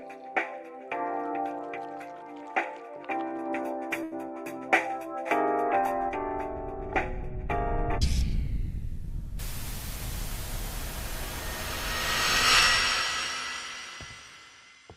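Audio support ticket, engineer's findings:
Held, fading smear at 4.03 to 4.13 s; sound resumes slightly ahead, a chunk skipped. Burst of packet loss on the network path: consecutive packets lost or late, receiver's concealment extending and attenuating the last sound for about 80 ms, about 80 ms of content gone.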